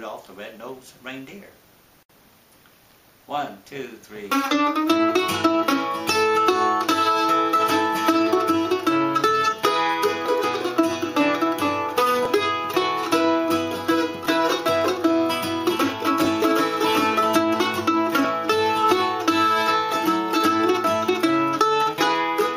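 From 10.26 s to 18.25 s, periodic USB or driver dropouts recur every 2.0 s, about five in all. Each time, something briefly stalls the audio path and roughly a millisecond of signal is skipped outright, leaving a small, evenly spaced tick wherever sound is present.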